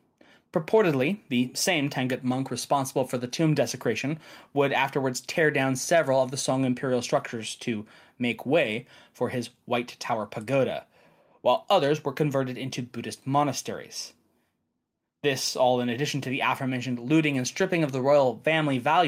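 No audible technical faults occur anywhere in the speech.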